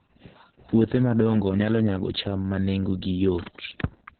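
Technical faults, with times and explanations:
Throughout: Opus voice compression. The speech is muffled, with nothing above 4.4 kHz, and it also sounds hoarse and slightly robotic. That points to the codec's linear-prediction voice mode working at a very low rate, around 6 kbps, where it narrows the band and codes the excitation coarsely, with long frames smearing detail. A simple low-pass filter or telephone band-limit would dull the sound without adding this grainy, synthetic roughness, which is what marks the damage as heavy codec coding.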